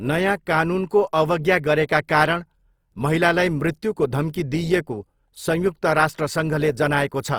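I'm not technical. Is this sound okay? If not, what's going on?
No. The recording was most likely squeezed hard by Opus compression, which saves space by rebuilding fine detail from copied or noise-like filler. Throughout the speech, that leaves it plainly rough and grainy, with a gritty, noisy edge, though not muffled.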